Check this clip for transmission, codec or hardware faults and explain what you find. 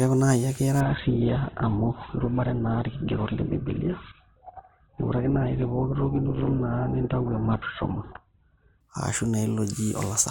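One fault: adaptive stream at a lower bitrate. From 0.81 to 8.81 s, the speech loses everything above 4.1 kHz. It turns thin, consistent with a slowed connection forcing a very low Opus bitrate. Quality snaps back without a gap.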